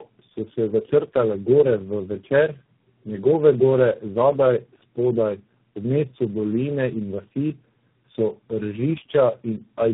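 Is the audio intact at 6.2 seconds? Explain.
No. At 6.2 seconds, as throughout the clip, this is tandem speech coding: the speech crossed AMR-NB at 6.7 kbit/s twice, then G.729A and G.726, re-coded at each border over G.711 links, so the degradation compounds. It sounds rough, muffled and warbly, with nothing above 3.8 kHz.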